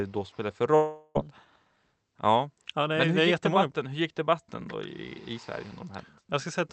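From 0.75 to 1.25 s, after "då spela för", the sound turns into a fading concealment buzz and then resumes with about 0.4 s missing, likely a long network dropout.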